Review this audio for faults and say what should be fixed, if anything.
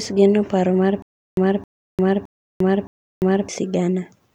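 From 1.02 to 3.49 s the speech hits a stutter with silent gaps: a roughly 267 ms burst comes back four times, each followed by about 349 ms of dead digital silence, so it ticks along at a steady 616 ms cycle. The likely cause is a stalled player or stream that replays its last fragment on each retry and then runs dry, so whatever should have played in that stretch is lost. To prevent it, give the playback or network path a deeper buffer and have retries resume from fresh data instead of replaying the previous fragment.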